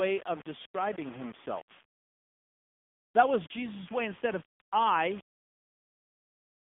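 Throughout the whole clip the speech has a gritty, grainy edge that moves with the voice. Quiet tails crunch or sputter, with the error only about 20 dB down. That's likely low bit depth without dither, rounded to something like 6 bits.

On top of that, it's squeezed through the AMR narrowband mobile codec, plainly audible as a buzzy, synthetic voice. The band runs from about 150 Hz to 3.6 kHz with nothing past 3.7 kHz, and the damage fits AMR-NB's 7.95 kbps mode.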